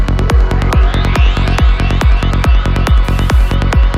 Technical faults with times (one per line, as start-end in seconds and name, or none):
3.04-3.54 stuck bit